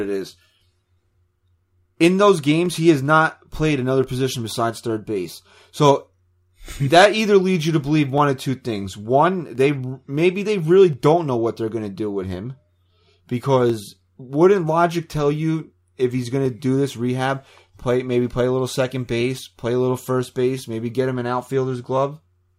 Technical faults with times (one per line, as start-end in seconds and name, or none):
1.28-21.97 clock drift buffer slips